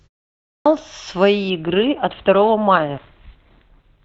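At 0.3 s, after a 0.3 s silence, the sound bursts in abruptly: a clipped start after a pause. The output device was still waking, so about 0.36 s of onset was swallowed. The waveform jumps from flat straight into speech, with no rising attack.

From 1.5 s to the end, the audio switches to an adaptive stream at a lower bitrate. The treble suddenly thins, which fits a step down to roughly 12 kbit/s Opus. A spectrogram shows a hard ceiling at 4.5 kHz, with smeared, blocky detail below it.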